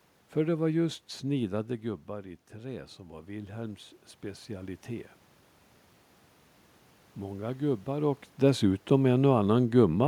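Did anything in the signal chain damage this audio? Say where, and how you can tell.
Yes, automatic gain rising in the call processing stage. Just after "det var just", around 1.5 s, the talker moves back and the level at the microphone drops by about 9 dB. From 1.51 s to 5.16 s the AGC slowly raises its gain by about 6 dB to compensate. You can tell it is processing rather than the talker because the room noise swells along with the voice over those seconds.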